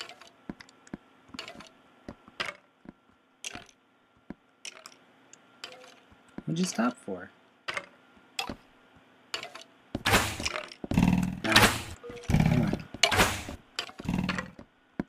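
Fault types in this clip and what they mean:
One channel drops out: the level falls abruptly by about 6 dB from 2.47 to 4.87 s, from 6.93 to 7.69 s, and from 13.85 s to the end, then snaps back after the first two. The likely cause is one stereo side going silent before the mono sum, so only the remaining side's half of the sum is left. A fader move or fade would ramp, but these steps are instant and exactly half the level.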